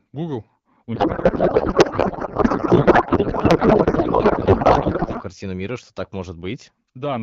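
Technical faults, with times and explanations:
0.95–5.22 s, codec payload misread: speech turns to garbled, warbling noise, which points to octet-aligned AMR read as bandwidth-efficient. The spectrogram shows smeared texture without harmonics until "картину мира что так".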